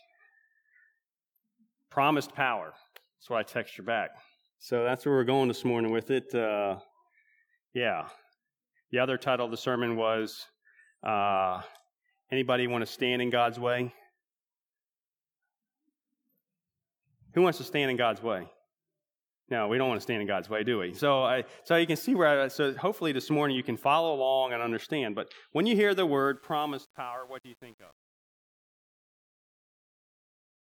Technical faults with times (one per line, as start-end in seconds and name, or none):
26.25-30.72 truncation distortion on a fade